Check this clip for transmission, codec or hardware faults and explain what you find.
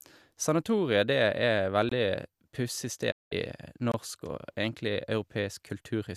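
Three transmission faults are audible in this speech clip: two chunk-boundary gaps and one digital broadcast dropout.

Gap between chunks, at 1.89 to 1.92 s and 3.92 to 3.94 s. The audio arrives in 2-second pieces, and each join leaves about 23 ms of silence, likely from padding or late chunk starts. Nothing is missing, but the speech breaks briefly with sharp-edged holes at regular spacing.

Digital broadcast dropout, at 3.10 to 3.33 s. The receiver lost valid data and muted until good frames returned. The speech fades out over 20 ms and stays silent for 192 ms, which fits about eight lost frames. That stretch of speech is gone, not delayed.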